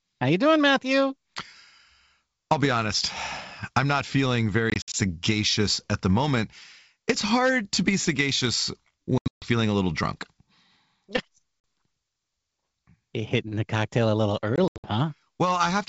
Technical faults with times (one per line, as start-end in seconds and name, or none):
4.70-4.95 packet loss on an ADPCM call
9.18-9.45 packet loss on an ADPCM call
11.60-11.64 packet loss on an ADPCM call
14.56-14.87 packet loss on an ADPCM call